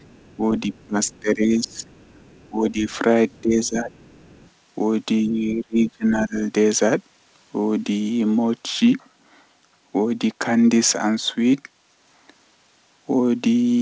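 A speech clip carried over a call path with nothing above 8 kHz, which fits a wideband codec such as G.722. A faint second voice, roughly 35 dB below the talker, murmurs underneath from 0.0 to 1.2 s, 1.67 to 2.98 s and 3.31 to 4.5 s. This is likely the other side's voice leaking through, where loudspeaker echo was not fully cancelled. The talker's own level sags and breaks up from 0.37 to 1.85 s, 2.49 to 2.88 s, 3.41 to 3.92 s and 5.26 to 6.36 s, dropping by about 15 to 25 dB at worst. That is likely speech suppressed in double talk, with the echo canceller turning the talker down along with the echo.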